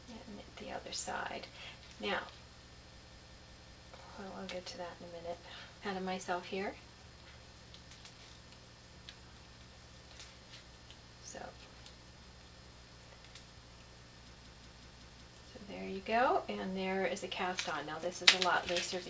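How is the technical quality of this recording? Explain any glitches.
The recording has some clear playback faults on top of a call-style channel. It's band-limited with nothing above 8 kHz and has the usual coding noise, which fits a wideband codec like G.722.

System hang loops, 2.97 to 3.90 s and again 14.37 to 15.30 s: the system froze while the hardware kept replaying its ring buffer. You hear one 185.76 ms chunk repeat five times, a stutter at 5.38 Hz, which points to an 8192-sample buffer.

Skip ahead at 5.82 s: something like a second of audio got dropped, probably by an overflowing jitter buffer, while later audio was already queued. Playback just jumps forward, with the two sides butted together and essentially no gap.

Jitter buffer speed-up, 5.96 to 7.40 s at 111% and 7.82 to 8.26 s at 113%: right after that jump, the receiver was still holding too much audio, so it trimmed tiny pitch-period slices, roughly 150 ms and 70 ms in total. 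The pitch stays put, but the sound feels rushed.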